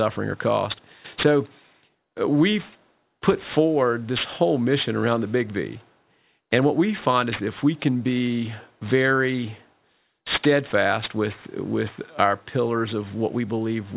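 Aliasing runs through the whole speech clip. The downsampling, which fits an 8 kHz rate, skipped its low-pass filter, so content above 4 kHz folds back as unrelated tones roughly 15 dB down, making sibilants gritty and metallic. A spectrogram shows energy slammed against 4 kHz, with mirrored streaks below.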